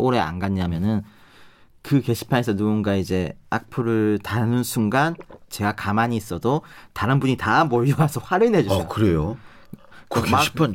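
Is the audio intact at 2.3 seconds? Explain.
Yes, at 2.3 seconds the speech plays through intact, with no audible fault at that moment.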